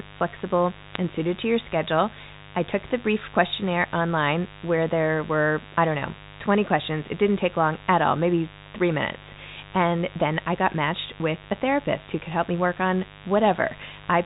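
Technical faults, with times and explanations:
Throughout: mains buzz, a steady raspy 50 Hz buzz roughly 20 dB below the speech. Sharp switching spikes twice per cycle spread its harmonics up to several kHz.
0.89 to 0.96 s: bit errors on a digital phone line. Flipped bits in the A-law telephone stream each corrupt a single sample, giving a short burst of sharp ticks over the speech.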